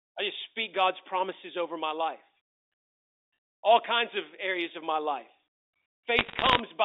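A burst of sharp ticks and crackle breaks over the speech from 6.19 to 6.6 s, while the talker underneath stays intact. These are bit errors on a digital phone line. On the telephone-band channel, which carries roughly 300 Hz to 3.7 kHz as on a G.711 mu-law line, each flipped bit corrupts a single 8-bit sample. When a high-order bit, or the sign of a loud sample, is hit, the result is a sudden spike. At an error rate of around one percent, the clicks pile up into audible crackle.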